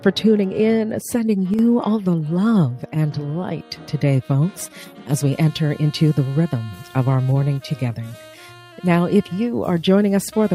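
From 1.54 to 1.59 s, one channel drops out, likely because one stereo channel was briefly lost. In the mono sum, material common to both channels falls abruptly by about 6 dB for those 50 ms, and anything only in that channel vanishes, leaving a short, sudden dip.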